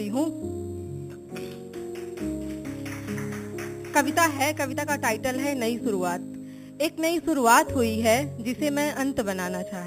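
From start to finish the audio carries imaging from sample-and-hold upsampling, a bright metallic fizz riding about 14 dB below the signal. The band above 4 kHz holds a mirrored copy of the content, with the lowest image spanning 4 to 8 kHz. This fits material at 8 kHz raised to 44.1 kHz by holding each sample, with no smoothing filter. Unlike steady hiss, the fizz swells and fades with the sound, and its tones move in the opposite direction to the pitch.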